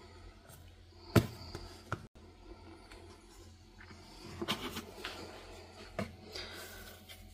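A digital broadcast dropout occurs from 2.07 to 2.20 s: the receiver stopped getting valid data and muted until clean frames arrived again. The sound cuts to silence for about 85 ms, consistent with two lost frames, and what was sent then is gone.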